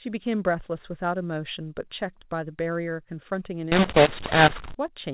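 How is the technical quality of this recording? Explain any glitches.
The recording is narrowband telephone speech, with nothing above 4 kHz as expected for G.711 coding. There is one clear glitch.

From 3.72 to 4.75 s, a mu-law and A-law mix-up occurs. Samples coded with mu-law are being decoded as A-law, so each 8-bit code maps to the wrong level on the logarithmic scale. Some levels are inflated, others shrunk, and the quietest ones are raised well above silence. The speech turns harsh and gritty, and gaps fill with noise. Unlike plain clipping, the distortion spreads into quiet moments, not just the peaks.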